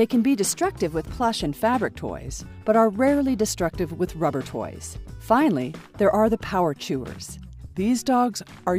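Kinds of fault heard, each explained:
Drift correction step: playback speed and pitch shift together, up 6.28% (105 cents) from 0.44 to 1.10 s, then down 6.28% (112 cents) at the end, likely a clock-matching rate step.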